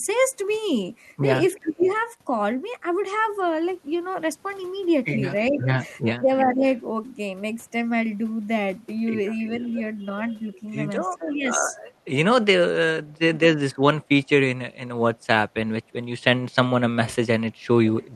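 Right at the start, 1.62 to 1.88 s, the speech dips by up to about 20 dB. That looks like speech suppressed in double talk: with both sides talking at once, the echo canceller likely couldn't tell its own talker from the loudspeaker return and ducked everything. Overlapping that, from 1.79 to 2.0 s, a faint copy of the voice comes back roughly 446 ms late, about 20 dB down. That's echo leak, likely a speakerphone whose canceller let part of the mic pickup through and sent it back.

The dipping returns at 5.51 to 6.63 s, deeper this time at up to about 25 dB, chewing holes in the speech for roughly a third of a second in total. At 9.55 to 9.74 s the delayed copy shows up again, now 473 ms behind and still about 20 dB below the speech.

Around 11.19 to 11.63 s the two happen together again. There's a milder suppression of about 10 dB, and from 11.51 to 11.76 s an echo trails in at the same 473 ms lag. 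Another short duck of about 15 dB follows at 13.26 to 13.4 s.

Right at the end, 18.0 to 18.06 s, there's one last brief scrap of echo about 450 ms behind. It's quieter, around 30 dB down.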